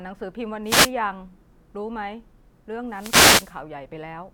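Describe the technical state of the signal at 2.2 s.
At 2.2 s the speech signal is intact, with no dropout, clipping, distortion or other technical fault audible at that point.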